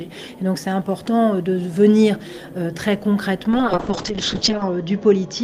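At 3.51 s, a call bitrate drop from 32 to 6 kbps lasts to the end, narrowing audio from 20 kHz to 8 kHz: muffled, watery coding with no gaps.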